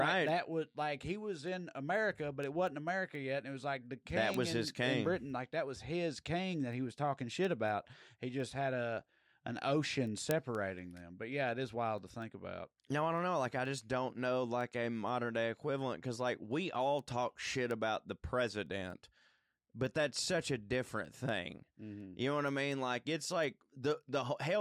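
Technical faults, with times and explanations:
0.29 to 24.39 s, word clock ticks: steady ticks about five times a second, around a hundred in all. The unlocked receiving clock drifts roughly 100 ppm from the sender's, dropping or repeating one sample at each slip.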